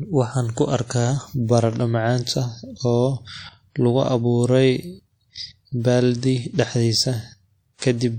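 From the start the speech has a washy, ringing quality, with hiss that swells and fades along with the talking. That's likely WMA compression: long transform blocks smear quantisation noise across tens of milliseconds, and the damage fits a low bitrate around 48 kbps, though the top end still reaches about 20.1 kHz. At 6.54 to 6.59 s there's pre-echo: a short hiss creeps in roughly 49 ms before a sharp onset, softening it, because the codec spread that block's noise over the quiet moment before the attack.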